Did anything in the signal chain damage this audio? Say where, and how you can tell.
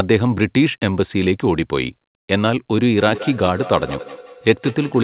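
Yes. From 2.98 s to the end, a feedback echo between two devices shows up in the call stage. A second device in the room replays the audio, and that open microphone sends it back. The echo canceller misses it because another device played it. Each syllable returns after about a fifth of a second, peaking around 15 dB below the speech. On a spectrogram these returns appear as fainter, evenly spaced copies of each syllable's pattern, all within the call's 4 kHz narrowband ceiling.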